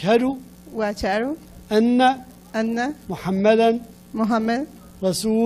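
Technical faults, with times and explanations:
No technical faults can be heard anywhere here.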